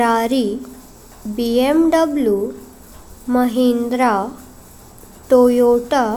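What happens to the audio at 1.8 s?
Nothing goes wrong at 1.8 s; the speech runs through that moment without any dropout, click, glitch or other audible fault.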